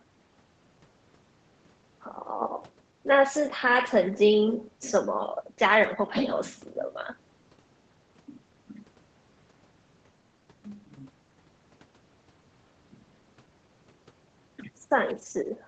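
No technical faults can be heard anywhere in this speech.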